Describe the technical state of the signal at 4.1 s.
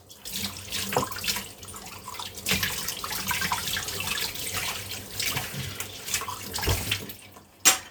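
At 4.1 s the signal is intact, with no audible fault at that moment.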